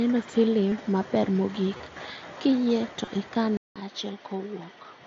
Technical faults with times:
0.71 concealed Bluetooth headset packet loss
1.77-1.80 concealed Bluetooth headset packet loss
3.05-3.07 concealed Bluetooth headset packet loss
3.57-5.06 input switched to a poorer device

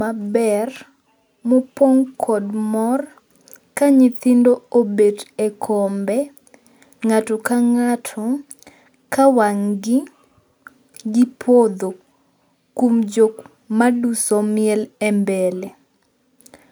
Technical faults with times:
none

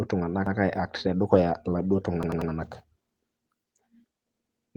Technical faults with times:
0.46-0.56 repeated buffer
1.33-1.39 lost packet rebuilt from error correction
2.23-2.51 repeated buffer
4.37-4.74 repeated buffer

